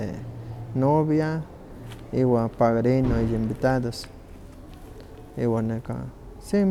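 Nothing stood out on listening to the speech in this clip.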